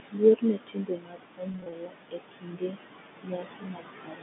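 Noise suppressor artifacts run through the whole clip. The suppressor pulls the steady room noise down by about 19 dB in each band it judges to be noise, frame by frame. As a result, the background drops away between phrases and swells back beneath them. Unlike a plain noise gate, the change happens band by band rather than simply switching on and off.

From 0.11 to 1.93 s comes the first stretch of speech cut by the noise suppressor. Over roughly a second and a half in total, the suppressor mistakes parts of the speech for noise and turns them down by as much as about 21 dB. Soft consonants and word endings sound swallowed or faint. The level dips follow the speech itself, not the line, and the cuts themselves carry no buzz or repetition, which sets them apart from a transmission loss.

Inside that stretch, between 1.52 and 1.72 s, packet loss with pitch repetition occurs. About 100 ms of audio goes missing in short gaps of no more than 20 ms each, scattered across 200 ms, which points to several separate lost packets. 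The receiver fills each gap by repeating the last pitch period, so the speech briefly takes on a held, slightly buzzy quality instead of dropping in level the way it does under the suppressor.

The suppressor cuts speech again from 2.11 to 2.78 s, affecting about half a second, and from 3.23 s to the end at 4.22 s, affecting about 0.7 s. In both spans the drops reach about 20 dB, and quiet syllables fade into the surrounding hush. These cuts pass over the telephone-band G.711 line, which is working normally.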